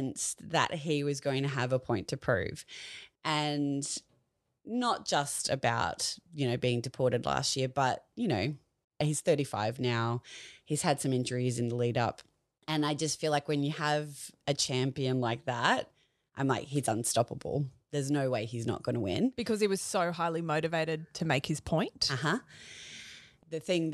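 No technical faults can be heard anywhere in the speech recording. Nothing interrupts or disturbs the audio at any point.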